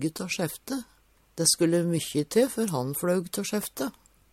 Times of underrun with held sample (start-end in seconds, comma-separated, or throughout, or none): none